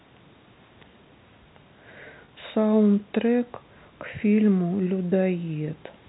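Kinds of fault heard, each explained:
Packet loss with pitch repetition at 2.25 s to 2.28 s: 30 ms of speech went missing, which fits a single lost packet, and the receiver bridged the gap by looping the last pitch period. The gap is shorter than the concealment's fade-out, so it never drops to silence. Instead it shows as a brief held, buzzy tone, heard within the narrow telephone band of the G.711 channel, which passes nothing above 4 kHz.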